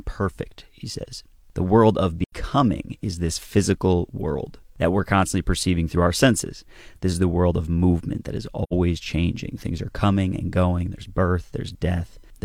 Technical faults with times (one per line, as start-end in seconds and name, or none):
2.24-2.33 AAC frame loss with muting
8.63-8.73 AAC frame loss with muting